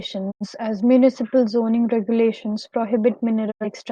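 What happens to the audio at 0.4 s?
At 0.4 s the speech sits inside a digital broadcast dropout spanning 0.30 to 0.46 s. The receiver stopped getting valid frames and muted, fading out over 20 ms. About 85 ms of programme, consistent with two lost frames, is missing before sound returns.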